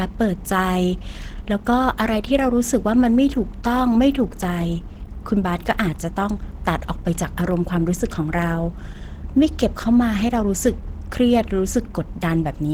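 From start to finish the speech sounds hoarse and muffled, with a plainly audible rough, grainy texture, even though content still reaches up to about 20.2 kHz. This is likely Opus compression. At a low bitrate the encoder falls back on its hybrid mode, which models the lower voice band parametrically and fills the upper bands coarsely. The effect is consistent with a rate near 16 kbps.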